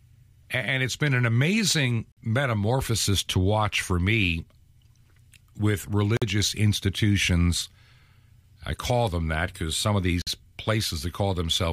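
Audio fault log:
2.12 s, 6.17 s and 10.22 s, gap between chunks: 50 ms silences every 4 s, between "it's been an amazing" and "metamorphosis to watch for", then after "that because some of", as silence is left at joins between chunks without dropping sound.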